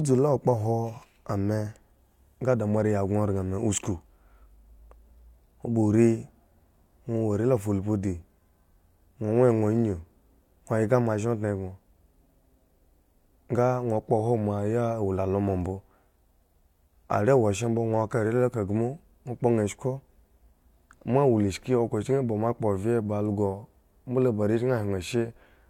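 No technical faults can be heard anywhere in the recording.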